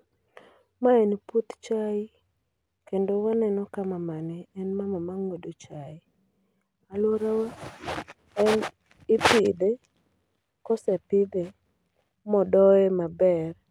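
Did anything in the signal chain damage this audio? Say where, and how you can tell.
No, nothing damaged it.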